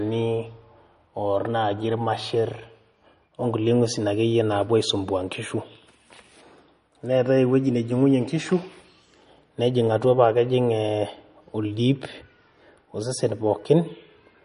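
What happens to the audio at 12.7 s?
At 12.7 s the speech sounds watery and swirly, with chirpy, metallic s sounds and nothing above 10.6 kHz, as it does throughout the clip. This is likely MP3 compression at a low bitrate, around 40 kbps, where the encoder cuts the treble and lets weak frequency lines flicker between frames.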